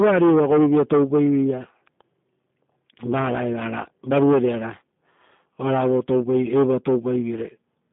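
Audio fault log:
Throughout, G.729 codec: the speech was rebuilt frame by frame from a vocal tract filter, pitch predictor and sparse pulses, consistent with G.729 at about 8 kbit/s, within a 150 Hz to 3.6 kHz band with nothing above 3.7 kHz. The result is muffled, plainly rough and synthetic.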